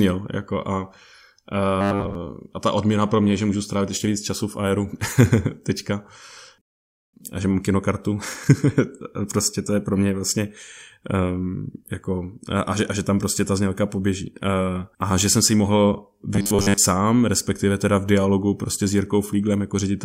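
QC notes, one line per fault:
1.81–2.15 s and 16.34–16.78 s, robotic sound from repeated short buffers. In both stretches the speech turns into a rigid, metallic buzz at 100 Hz. That rate fits a chunk about 10 ms long being played again and again. Most of each stretch is repeated material rather than new audio, so the real speech in between is skipped. The likely cause is new audio arriving too seldom, with the gaps filled by repeats.
6.61–7.14 s, rebuffering stall. The speech cuts to silence and then resumes exactly where it stopped. No audio is lost. The pause adds 520 ms to the timeline. This is the player running out of downloaded audio and waiting until more arrives.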